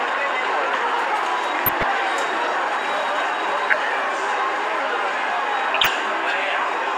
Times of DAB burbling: 1.66-1.83, 3.70-3.73, 5.74-5.88

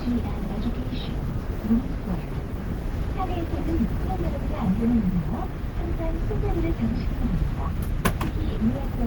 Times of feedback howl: none

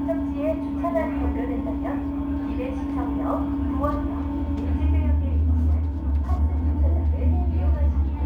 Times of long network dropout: none

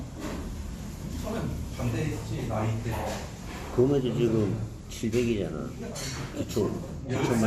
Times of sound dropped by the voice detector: none

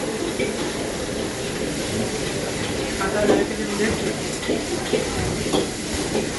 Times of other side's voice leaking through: none

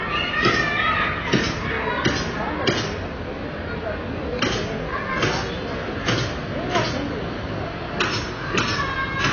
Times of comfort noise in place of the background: none

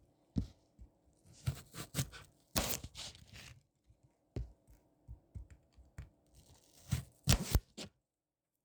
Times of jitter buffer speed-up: none

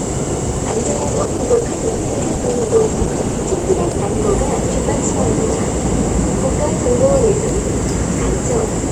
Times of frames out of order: none

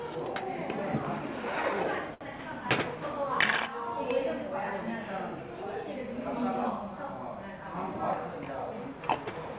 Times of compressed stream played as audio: none

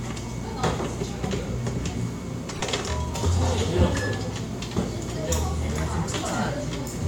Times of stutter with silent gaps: none

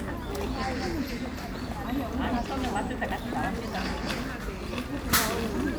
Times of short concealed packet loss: none

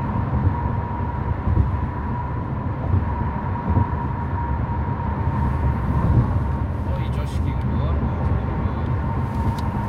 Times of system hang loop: none

